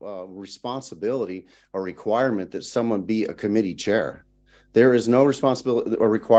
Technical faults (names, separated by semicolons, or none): automatic gain rising